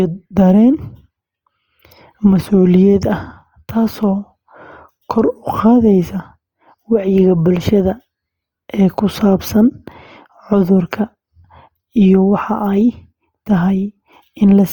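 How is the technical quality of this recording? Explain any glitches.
Plainly audible codec damage runs through the whole speech clip. It is likely Opus compression in its music (CELT) mode, at a low rate consistent with about 24 kbps. Band energies are kept but starved of bits, and missing detail is filled with folded or noise content, so the speech sounds grainy and rough. The full bandwidth survives, reaching up to 20.1 kHz.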